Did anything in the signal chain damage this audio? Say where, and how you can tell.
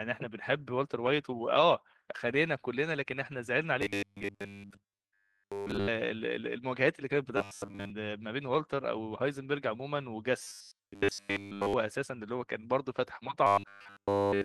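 Yes. Robotic sound from repeated short buffers at 3.82–5.88 s, 7.37–7.92 s, 10.40–11.75 s and 13.47 s to the end turns the speech into a rigid 100 Hz buzz: a 10 ms slice repeats while real audio is skipped, likely driver buffer underruns.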